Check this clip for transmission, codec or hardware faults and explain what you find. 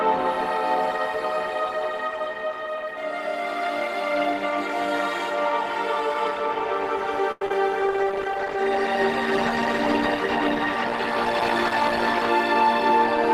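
Two transmission faults are present, both in the second half.

From 7.31 to 7.53 s, repeated packet loss (robotic sound) leaves five gaps, the longest 96 ms. Each is patched by extending the previous sound, so over half that stretch is filler and comes out choppy.

From 7.81 to 12.35 s, a call bitrate drop forces coarser encoding, pointing to a fall from about 32 to 16 kbps. The sound turns rough, watery and dulled until it recovers.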